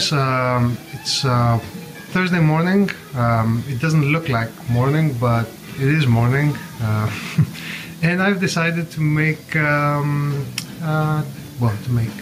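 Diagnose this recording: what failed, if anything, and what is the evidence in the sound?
Gain pumping runs through the whole clip: the level rises and is pulled back down by around 5 dB, tracking the louder moments, so loud and soft passages sit closer together and the sound is squashed. The likely cause is input gain set far too high at the microphone stage, with a fast limiter or compressor clamping each loud sound. Unlike clipping, the waveform tops are not sheared off; the whole level is ducked and then recovers.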